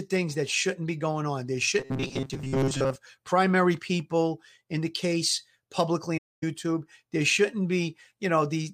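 From 1.79 to 2.96 s the speech turns into a rigid metallic buzz near 134 Hz, robotic sound most likely from repeating short buffers of about 7.5 ms. At 6.17 s, AAC frame loss with muting leaves a soft-edged 256 ms silent hole, faded out and back in, ending at 6.44 s.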